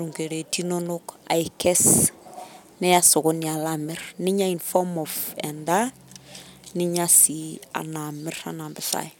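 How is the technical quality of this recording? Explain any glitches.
No glitches or technical faults can be heard anywhere here.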